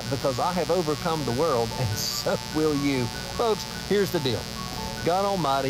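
Mains buzz runs throughout the clip, built on 60 Hz. Sharp switching spikes, likely from a dimmer, rectifier or unshielded cable, leak in twice per mains cycle, spraying harmonics up into the kilohertz range. The result is a steady, raspy buzz sitting prominently beneath the sound.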